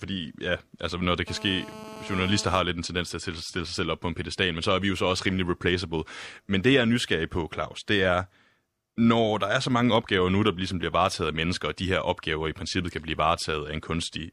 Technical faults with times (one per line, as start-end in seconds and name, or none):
1.28-2.59 GSM phone buzz